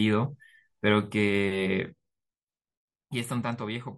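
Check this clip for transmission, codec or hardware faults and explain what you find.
One fault shows up in the speech: zipper noise during a level drop between 1.78 and 2.22 s. The gain falls by roughly 10 dB, but in unsmoothed 1 dB steps at around twenty per second. Each jump puts a small discontinuity in the waveform, so a fine ticking or zipping rides on the speech while the level moves. A smooth fader-style change glides silently. Zipper noise clicks only during the move and stops once the level settles.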